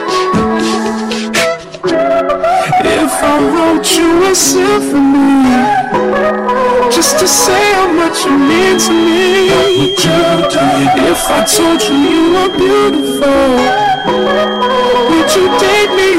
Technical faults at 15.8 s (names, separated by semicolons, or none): hard clipping; feedback whistle